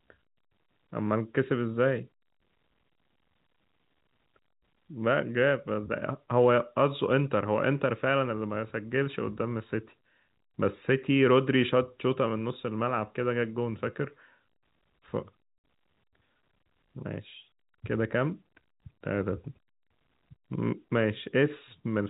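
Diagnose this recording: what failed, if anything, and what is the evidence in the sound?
At 15.58 s the speech drops out abruptly for 60 ms, ending at 15.64 s, with hard edges where the waveform cuts out and then resumes. The fault is in the network stage: packet loss filled with silence. Consecutive packets never arrived, and the receiver played digital silence in their place. A 60 ms gap fits three 20 ms packets. The telephone-band G.711 coding is audible throughout, with nothing above 4 kHz.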